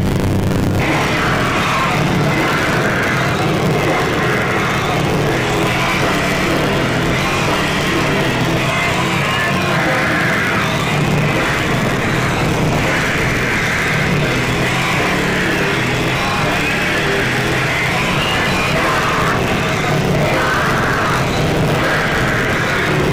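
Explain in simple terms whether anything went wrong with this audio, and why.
A robotic buzz at 100 Hz runs through the whole sound. This is buffer tearing: each short chunk briefly replays slightly older audio, leaving harsh joins.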